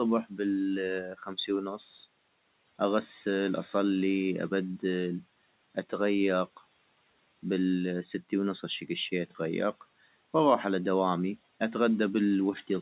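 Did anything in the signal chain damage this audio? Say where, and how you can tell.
Yes. The call processing's noise suppressor misjudged speech as noise between 1.03 and 1.5 s, causing speech cut by the noise suppressor. It pulled the level down by as much as about 12 dB, so around a third of a second of sound turns faint and swallowed.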